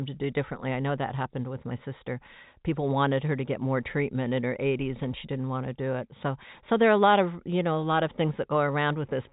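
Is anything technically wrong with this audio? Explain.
No, nothing is technically wrong with this speech audio, which carries the expected narrow band of G.711 telephone coding with nothing above about 3.8 kHz.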